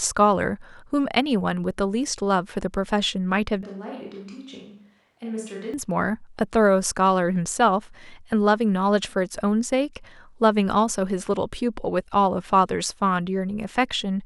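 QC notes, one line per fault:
3.63 to 5.74 s, switch to a distant microphone: the speech abruptly turns roomy and hollow, thinner in the low end, and falls by about 10 dB. Room noise rises to roughly 35 dB below the speech. At 5.74 s the close, full sound returns just as suddenly. The likely cause is that the close microphone's signal dropped out and a farther pickup, hearing more room reflections and ambience, carried the audio for those two seconds.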